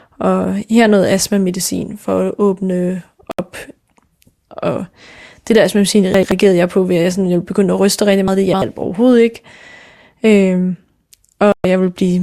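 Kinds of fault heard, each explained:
Digital broadcast dropout, at 3.31 to 3.39 s and 11.52 to 11.65 s: the receiver stopped getting decodable frames and muted until valid ones returned, so the speech drops abruptly to silence and resumes further on. The first gap is about 72 ms, consistent with three lost frames of roughly 24 ms, and the second about 120 ms, pointing to five. The speech that should have filled those holes is gone.
Chunks out of order: at 6.14 to 6.32 s and 8.28 to 8.62 s, a block of audio of about 85 ms was delivered or written late and plays after material that should have followed it. At 6.14 s it lands one block late, and at 8.28 s three blocks late, making the jumble longer. Nothing is missing, but the sequence is scrambled.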